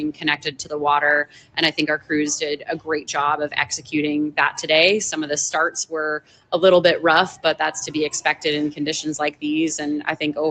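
A noise suppressor built for speech is applied to music or sounds here, and it treats held tones, ambience and decaying tails as noise, so the level swings by around 10 dB and the sound pumps and thins. Onsets still come through. That separates this from ordinary compressor pumping, which ducks on loud attacks rather than on quiet sustains. The worst cases are sound cut by the noise suppressor at 0.12–0.75 s, 1.25–1.57 s, 2.57–3.11 s, 3.72–3.92 s and 6.19–6.53 s, with drops of about 15, 15, 15, 11 and 17 dB. These are sustained or fading sounds sinking and having their decays shortened, not hard dropouts, because transients mostly come through while the tail sinks. The call path limits the audio to nothing above 8 kHz, which fits a low-bitrate Opus call.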